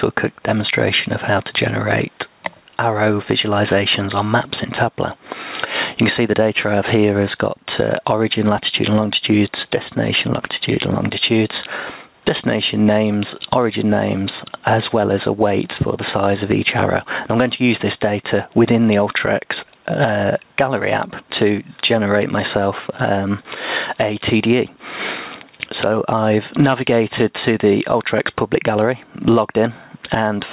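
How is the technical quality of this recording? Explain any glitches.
The recording has one fault that runs throughout: gain pumping, audible as the level repeatedly dipping and recovering. The sound arrives through a call path that leaves nothing above 4 kHz, which fits a narrowband telephone codec such as G.711.

For the whole clip, the level ducks under each loud sound and swells back in the quieter stretches, with a swing of around 15 dB. The likely cause is input gain set far too high, with a fast limiter or compressor clamping every loud event, squashing loud and soft parts together.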